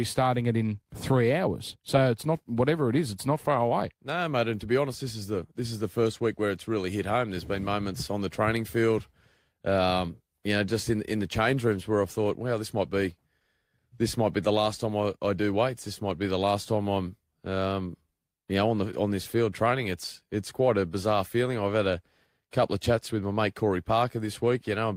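No technical faults are audible anywhere in the recording.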